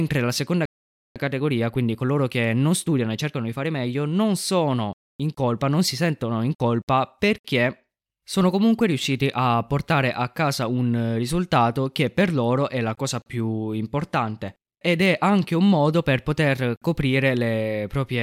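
Just after "la seconda", at 0.65 s, the speech cuts to silence for about half a second, to 1.16 s. This playback stall is likely the player running out of buffered data or having its thread held up.

From 1.16 s to 4.16 s the player works off that backlog with time-compressed catch-up, cutting out small slices and cross-fading the joins so the speech runs at 1.1 times normal speed until "sono in colpa non". The delivery sounds rushed. Unlike a simple speed-up from resampling, the pitch stays where it belongs. Only the timing is squeezed, so the speech is hurried but not raised in pitch.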